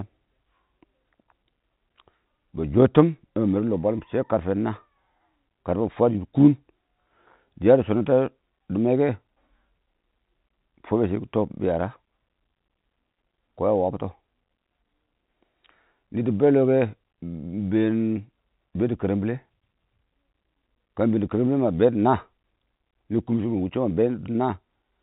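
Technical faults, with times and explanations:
No technical faults heard.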